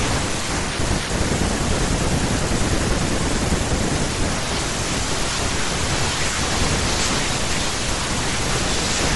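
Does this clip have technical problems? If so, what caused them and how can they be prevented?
Yes. Throughout the speech there is a grainy, breathy edge with a dulled top end. This plainly audible damage is likely from Bluetooth LC3 compression, which thins out the upper spectrum and fills it with noise, consistent with a setting near 48 kbps. Raising the LE Audio bitrate or using a wired path prevents it.

At about 4.05 s there is a brief noisy smear where the sound should continue cleanly. This fits one lost LE Audio frame of 10 ms, which the decoder covered by repeating its last spectrum with scrambled phase. Keeping the devices close and away from interference prevents such losses.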